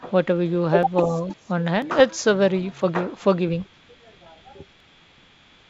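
You've got a short bit of speech carried over what sounds like full-rate G.722 wideband, clean up to around 7 kHz, and four separate kinds of trouble in it. First, there are tiny skips at 0.83, 1.82, 2.82, 3.81 and 4.80 s, almost exactly a second apart, each dropping just a few milliseconds with the two sides butted together and no gap. That's likely audio missing between chunks: something handling the stream in one-second blocks loses a sliver at each handover, so you get a jump on that regular beat. Between 1.05 and 1.15 s the talker dips by about 5 dB for roughly a tenth of a second. That's likely speech suppressed in double talk, where the far end spoke at the same moment and the echo canceller, unable to tell the near voice from loudspeaker pickup, pulled everything down for a moment. Right after that, from 1.28 to 1.47 s, a faint copy of the voice comes back about 20 dB down and 319 ms late. 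That's likely an echo leak, with the far end on speaker and its canceller letting some of what the mic heard slip back down the line, so a delayed ghost trails the speech. Finally, at 1.99 to 2.00 s there's a short rough pop with a brief level wobble, which is bit errors on an ADPCM link. A couple of corrupted codewords knock the decoder's step size and predictor off track, so the damage rings on for a few milliseconds instead of staying a single-sample glitch.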